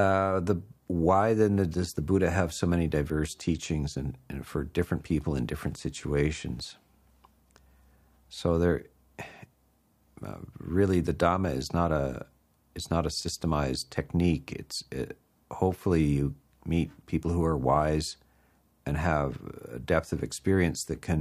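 Nothing here sounds amiss: the audio runs along steadily with no dropouts, glitches or other technical trouble to point to.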